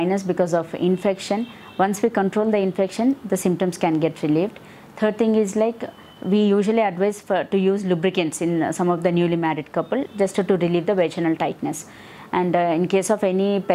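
No technical faults can be heard anywhere in this audio. Nothing in it points to a problem with how the sound was captured, processed or delivered.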